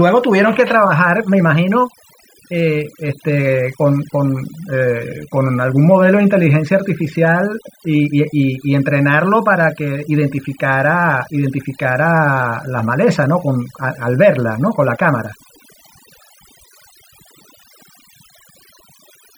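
From start to finish the speech carries overdone noise removal: a noise reducer set too strong has pulled individual frequency bands down whenever they sat near its noise estimate, taking quiet parts of the voice with them and leaving a background that drops and breaks up into twinkling specks. Unlike a noise gate, it works band by band rather than switching the whole signal on and off.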